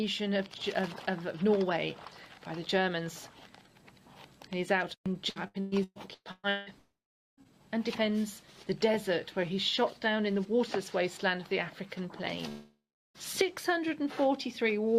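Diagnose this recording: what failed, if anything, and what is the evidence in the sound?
Repeated packet loss (robotic sound), a network fault, from 5.29 to 6.69 s: seven gaps up to 170 ms are patched with copied sound, showing as repeated, smeared spectrogram blocks.

Long network dropouts at 6.78–7.40 s and 12.49–13.17 s, likely from lost packets: a fading buzz gives way to a flat waveform, silent for about 0.41 s and 0.31 s.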